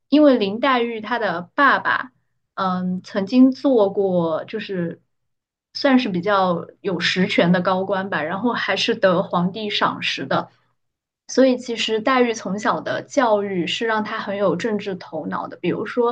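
No technical faults can be heard in this recording.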